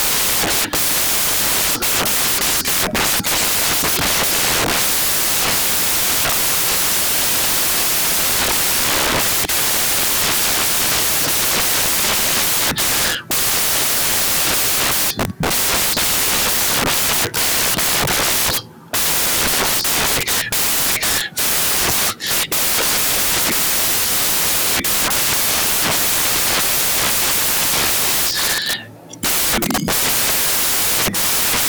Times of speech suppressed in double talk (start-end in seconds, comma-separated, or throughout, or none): none